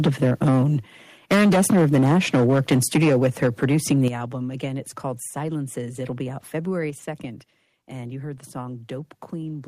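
Microphone overload from 0.05 to 0.65 s drives the loudest speech peaks about 9 dB past full scale, roughly a tenth of the waveform flattened, giving a harsh crackle, likely from input gain set too high. Microphone volume stepped down at 0.07 s: the level drops about 3 dB in one step, likely the call software cutting the device gain after detecting that clipping. Microphone overload returns from 1.31 to 4.08 s, worse at about 13 dB over and roughly 15 percent of samples clipped, likely from the same excessive input gain. Within it, further stepped-down gain hits at 3.08 s (about 3 dB) and at 4.08 s (about 9 dB), where the crackle stops as speech and background fall sharply, likely automatic gain correction. A final step down at 6.9 s, about 4 dB, audibly lowers everything again, likely the same automatic correction.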